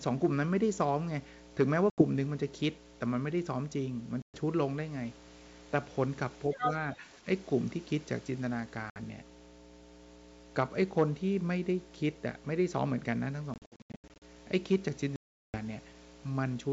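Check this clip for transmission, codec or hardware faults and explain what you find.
There are several problems here: a steady hum under everything, repeated dropouts from lost packets, and a short patch around 6.5 to 7.3 s where the talker dips and a second voice bleeds in.

The mains hum runs the whole length of the speech. It's a constant low tone at 60 Hz, sitting roughly 20 dB below the speech. That's power-line interference getting into the signal, from a ground loop or a transformer close to the cabling or mic. It doesn't move or change, so it reads as a fixed buzz rather than anything the speech is doing.

The packet loss on an ADPCM call shows up five times. There's a clean 80 ms hole at 1.90 s, 120 ms at 4.22 s and 60 ms at 8.90 s. Between 13.54 and 14.23 s there's a chopped stretch with about 420 ms missing, broken up over 680 ms, where no single gap runs longer than 80 ms. The last is a long 380 ms hole at 15.16 s. 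Each gap is hard-edged silence. Afterwards the decoder's predictor and step size no longer match the sender's, so the speech comes back slightly distorted before it settles.

Speech suppressed in double talk happens at 6.54 to 6.65 s and again at 6.85 to 7.26 s. The talker drops by about 10 dB in the first patch and by a few dB in the second, so the level sags. This is likely an echo canceller that heard both sides at once, couldn't separate them, and turned everything down.

The other side's voice leaking through overlaps this at 6.54 to 6.71 s. A second voice comes in at about the same level as the talker. The likely cause is loudspeaker pickup that the echo canceller didn't fully remove from the mic.

Underneath all of this, the wideband G.722 coding itself sounds clean, with crisp top end and no obvious coding grit, which points to the full 64 kbit/s mode.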